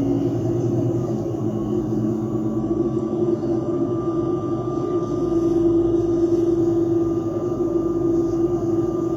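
From 2.59 s to 6.59 s the audio switches abruptly, with no gap, to an adaptive stream at a lower bitrate. For those four seconds treble above about 14.9 kHz disappears, pointing to a drop from roughly 96 kbit/s AAC to 24 kbit/s HE-AAC.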